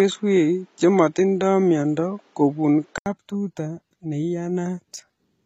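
The input was likely running through a poorer device from the start until 3.06 s. It passes nothing above 7.6 kHz, so the speech sounds dull and boxy, with a noise floor roughly 40 dB down. At the switch, an 80 ms silence precedes clearer, roughly 5 dB different sound.

Throughout, HE-AAC compression rebuilds the treble from copied lower bands rather than coding it, with nothing above 14.9 kHz. The damage is plainly audible: sibilants turn gritty and metallic, which fits a low bitrate near 20 kbps.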